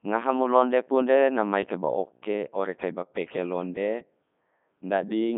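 From start to finish the speech sounds robotic and buzzy, confined to roughly 150 Hz to 3.6 kHz with nothing above 3.7 kHz. This is heavy Codec 2 vocoder damage. The voice is resynthesised from pitch, voicing, energy and envelope rather than the waveform, which fits the 3.2 kbit/s mode.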